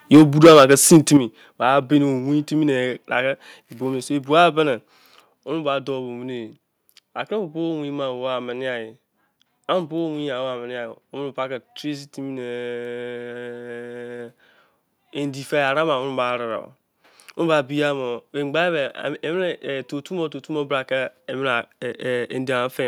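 The speech opens with microphone overload from 0.13 to 1.17 s. Peaks run about 10 dB past the limit, flattening roughly 7 percent of samples into a harsh crackle, likely from input gain set too high. Microphone volume steps down at 0.17 s by about 2 dB and at 1.17 s by about 7 dB. Voice and background drop together, likely from call software cutting input gain after clipping.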